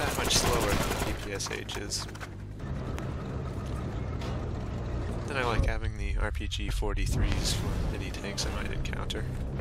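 A loud pop appears twice, at 2.99 to 3.01 s and 7.32 to 7.34 s, peaking about 15 and 20 dB above the sound. The audio continues underneath, unlike a dropout, so a voltage pulse from a plug, switch or static discharge is the likely cause.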